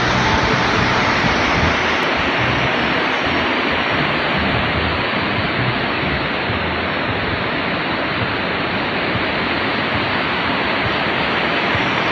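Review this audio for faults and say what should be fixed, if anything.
There are compressed frames skipped at 6.50 s and 9.55 s. Whole 23.2 ms frames never play, so the audio jumps ahead about 50 ms, then about 100 ms. Grab the file again from a clean source or re-encode it, and check its integrity so no frames go missing or get rejected.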